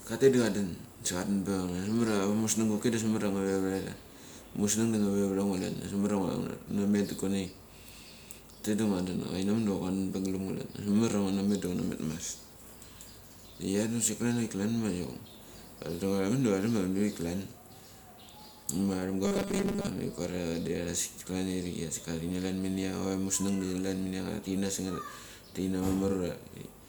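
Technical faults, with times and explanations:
19.25 to 19.88 s, robotic sound from repeated short buffers: for about 0.6 s the voice turns into a rigid, metallic buzz pitched at 200 Hz that only loosely tracks the words. The likely cause is that audio stopped arriving in time and the playback software kept reusing the most recent tiny slice, around 5 ms long, skipping most of the real sound. Looping a 5 ms slice imposes that fixed 200 Hz tone.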